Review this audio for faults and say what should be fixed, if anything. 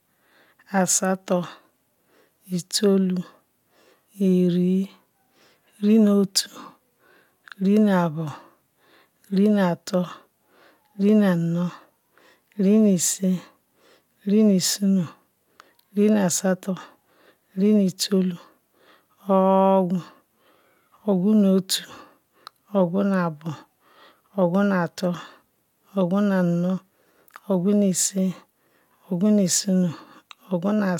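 No faults; nothing to fix.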